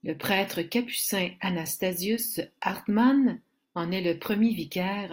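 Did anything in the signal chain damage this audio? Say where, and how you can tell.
No, nothing in this speech recording stood out as damage from any stage of the chain on listening.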